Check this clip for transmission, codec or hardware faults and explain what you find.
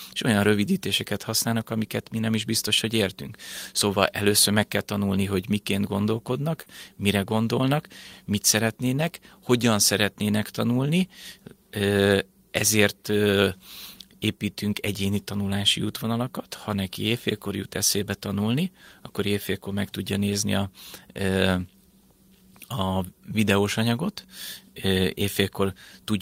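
There's one fault in this speech. At 6.61 to 6.68 s, just before "mire gondolnak mit szeretnének", a burst of packet loss drops about 40 ms; the receiver stretches the last sound into a brief fading tail, then jumps ahead with a bit missing.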